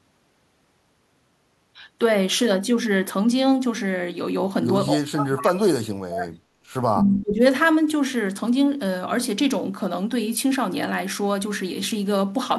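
An echo canceller likely suppressed speech in double talk, mistaking the talker for echo: from 4.91 to 6.35 s the speech plunges very deeply, then dips more moderately from 6.97 to 7.41 s.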